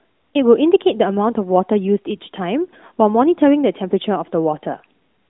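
Nothing stood out on listening to this speech recording.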